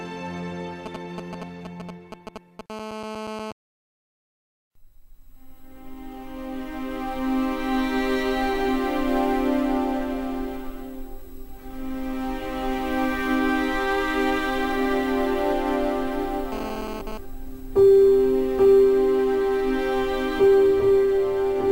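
A nearby 2G phone exchanging signalling with its network sent short groups of radio bursts from 0.86 to 2.61 s, and the audio circuit rectified them into the signal path. These GSM signalling bursts come through as a galloping dit-dit-dit of short buzzes at 217 Hz, the phone's burst rate, sitting roughly 10 dB below the wanted audio, irregular rather than continuous.

From 2.70 to 3.52 s the phone moved into a call and transmitted steadily at 217 bursts per second. The rectified pulses produce a continuous GSM phone buzz, a hard, raspy tone at 217 Hz with a dense stack of harmonics, about 10 dB below the signal and unrelated to it. The same buzz returns from 16.52 to 17.18 s while the phone was transferring data, again about 10 dB down, cutting in and out with the transmission.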